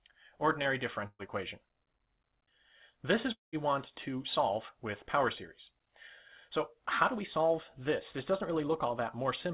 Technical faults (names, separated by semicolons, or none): burst of packet loss; long network dropout